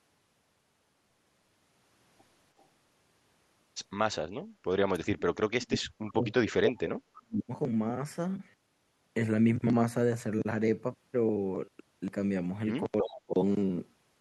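At 2.59 to 2.64 s, an echo leak, likely from the far end's echo canceller letting loudspeaker pickup through, returns a very faint scrap of speech delayed by 323 ms. From 4.96 to 7.5 s, speech suppressed in double talk, likely the canceller ducking both talkers during overlap, turns the voice down for roughly two seconds, at worst by around 40 dB. At 13.02 to 13.34 s, a shorter suppression dips the voice by around 25 dB. Within that dip, from 13.14 to 13.2 s, a stronger echo leak returns the speech again 323 ms late.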